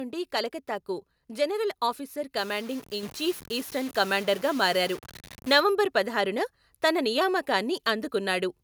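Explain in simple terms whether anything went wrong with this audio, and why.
Low bit depth without dither, from 2.38 to 5.6 s: the speech turns grainy and rough, and the quietest parts crackle or drop out. The likely cause is that the sound was stored with too few levels, which fits about six bits, and was rounded down without dither, so the errors follow the speech.

Microphone volume stepped up at 3.03 s: the speech and the background suddenly get louder together in one jump. The call software judged the microphone too quiet and raised its input volume in a single step.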